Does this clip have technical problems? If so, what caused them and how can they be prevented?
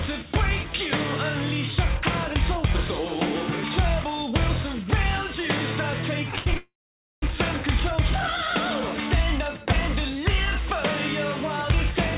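Yes. From 6.31 to 6.56 s there are repeated stalls, a stutter. The sound halts four times, and the longest gap is 80 ms. Late packets kept draining the jitter buffer, so the receiver stretched the last sound to fill each gap. About 45% of that stretch is filled-in sound, but nothing is lost. A larger adaptive jitter buffer and a steadier network link would prevent this.

Right after, from 6.57 to 7.23 s, the audio stops moving forward. The last sound carries on briefly, then fades to silence for about half a second. The audio then resumes exactly where it stopped, with nothing missing. This is likely a call audio freeze, with packets held up in transit for about 650 ms. Reducing network congestion, or giving call traffic priority, would prevent it.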